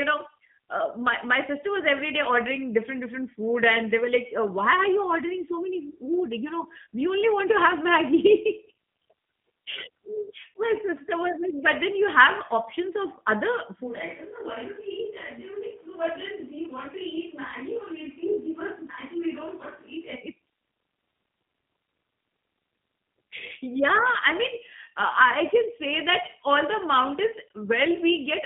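Speech passed through a G.729 codec for its whole length. The telephone-band coding sound fits G.729A at 8 kbit/s, which models the voice with a vocal tract filter, pitch prediction and sparse pulses. The line band runs from about 150 Hz to 3.6 kHz, nothing survives above 3.8 kHz, and the voice carries a plainly audible rough, synthetic edge. From 13.89 s to 20.14 s the pickup likely moves to a distant microphone in place of the close one. The voice abruptly turns roomy and hollow with thinner bass, drops by about 10 dB, and room noise rises to roughly 25 dB below the speech, before it snaps back at 20.14 s.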